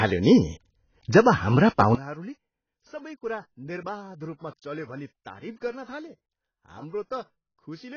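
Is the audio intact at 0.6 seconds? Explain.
No. At 0.6 seconds the speech carries the same damage heard throughout the clip: nothing reaches above 6.8 kHz, and the remaining band sounds dull and smeared, with a warbling, fizzy texture on sustained sounds and sibilants. This heavy degradation is likely AAC compression. At a very low rate, around 18 kbps judging by the sound, AAC-LC lowers its cut-off and quantises its frequency lines too coarsely, which leaves gaps and substitute noise in the spectrum.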